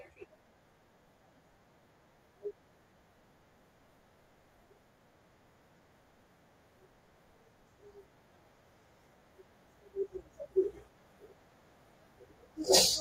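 At 0.37 s, then 5.77 s, 8.34 s and 12.04 s, the speech breaks briefly with lost LE Audio frames. Each gap is 15 to 23 ms long. The LC3 decoder fills it by repeating the last spectrum with randomised signs, so the sound turns into a short, noisy smear.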